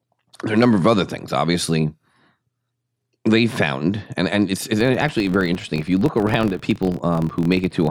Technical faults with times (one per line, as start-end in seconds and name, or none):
4.81-7.90 filter restarted on every block